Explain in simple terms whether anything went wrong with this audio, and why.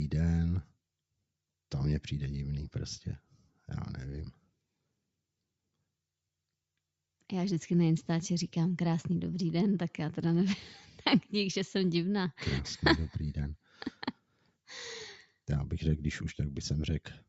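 Between 14.13 and 14.68 s, a stretch of sound is cut by the noise suppressor. The call's noise filter mistook part of it for background noise and turned it down, so for roughly a third of a second it sinks quieter or fades out early. This is not a dropout from a bad connection: the sound never stops completely or jumps, and sharp, sudden sounds still get through while steadier parts are turned down.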